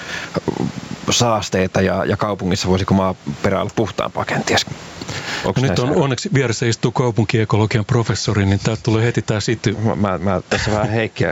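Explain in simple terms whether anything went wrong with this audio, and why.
Gain pumping runs through the whole clip, so loud and quiet parts sit unnaturally close together. The likely cause is input gain set far too high, with a fast limiter repeatedly pulling it back down.

From the start to about 5.8 s there is also sample clock jitter. The converter's timing wobbles by roughly a couple of millionths of a second, so each sample is taken slightly off time. That adds a faint hiss or roughness that grows on louder, brighter speech and disappears in the gaps.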